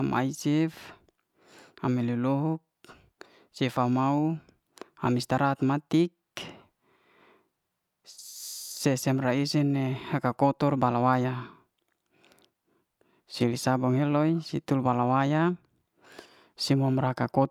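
No technical faults are audible anywhere in the speech recording.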